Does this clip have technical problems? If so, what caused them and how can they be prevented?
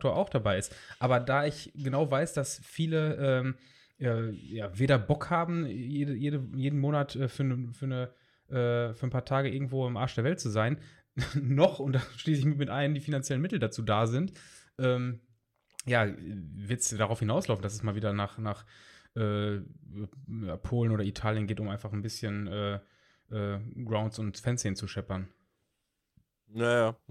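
No, nothing in this speech recording stood out as a technical problem on listening, so there is nothing to trace to a cause or guard against.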